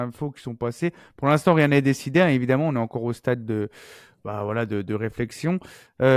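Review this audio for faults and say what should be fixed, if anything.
No faults can be heard in this audio, so nothing needs to be fixed.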